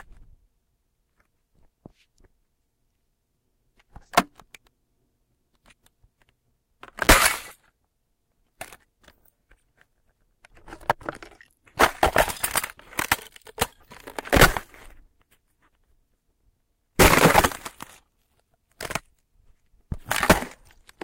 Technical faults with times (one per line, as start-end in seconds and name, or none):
7.01-7.07 intermittent contact